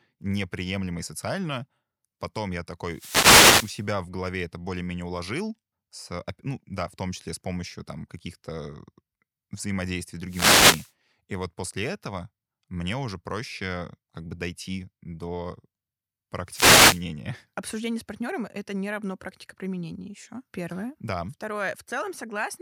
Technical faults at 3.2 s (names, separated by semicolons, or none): wireless microphone noise hit